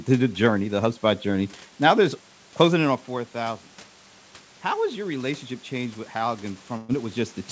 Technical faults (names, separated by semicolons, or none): burst of packet loss